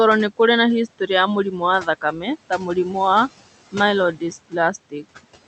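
Noise suppressor artifacts run throughout: the suppressor pulls the room noise, which sits about 17 dB below the speech, down by about 16 dB between phrases, so it ducks and returns under speech.

Speech cut by the noise suppressor occurs at 1.82–2.28 s, 2.5–2.95 s, 4.14–4.33 s and 4.9–5.25 s. In these spans, quiet parts of the speech were mistaken for noise and dropped by about 9, 9, 14 and 18 dB, so they sound swallowed or faint.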